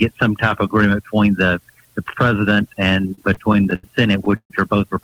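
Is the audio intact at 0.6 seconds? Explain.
Yes, the audio is intact at 0.6 seconds, with no fault present at that moment.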